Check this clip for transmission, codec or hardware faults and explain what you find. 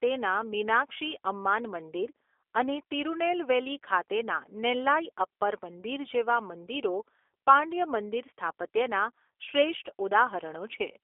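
One codec fault runs through the whole recording. The speech sounds rough, buzzy and faintly synthetic, confined to roughly 300 Hz to 3.5 kHz with nothing above 3.6 kHz. This is G.729 (the A variant): each 10 ms frame is rebuilt from a vocal tract filter, pitch predictor and sparse pulses, which fits an 8 kbit/s stream.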